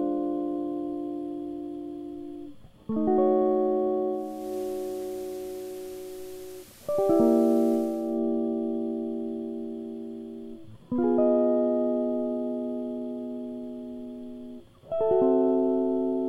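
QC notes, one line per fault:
4.08–8.23 s, digital radio blending to analogue: the receiver lost its digital stream and cross-faded over 0.49 s to the FM broadcast and back. Level dips about 1 dB, and hiss rises to roughly 25 dB below the music. The spectrogram shows a raised noise floor.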